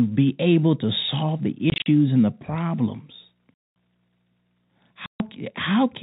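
Packet loss filled with silence hits the speech at 1.7–1.86 s (scattered dropouts, longest 40 ms), 3.54–3.76 s (220 ms) and 5.06–5.2 s (140 ms). Missing stretches play as hard-edged holes in multiples of 20 ms, which fits 20 ms packets over the 4 kHz-limited telephone band.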